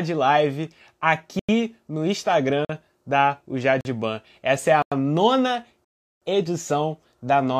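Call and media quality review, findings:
Block of digital silence, five dropouts in this speech. At 1.39–1.49 s, a 93 ms hole. At 2.65–2.69 s, 44 ms, just before "da o". At 3.81–3.85 s, 43 ms. At 4.82–4.92 s, 93 ms, between "é a" and "nona edição". At 5.85–6.22 s, 372 ms, after "é a nona". Probable component: the output buffer fill. The render path misses its deadline and zeros go out. The 93 ms and 372 ms lengths fit 4096- and 16384-sample buffers.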